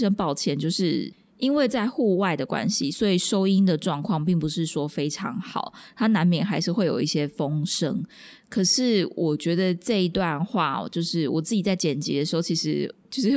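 No technical faults are audible.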